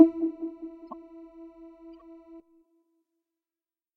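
A glitch at 0.91 to 0.93 s, peaking at about -25 dBFS, and a fainter one at 1.94 to 2.02 s, about -45 dBFS, are each a corrupt frame decoded. Flipped bits misplaced energy across roughly two and four damaged frames.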